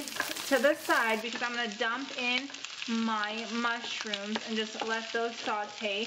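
At 1.21 s the sound turns duller and quieter, with nothing above 7.6 kHz and faint noise. The input likely switched to a poorer device.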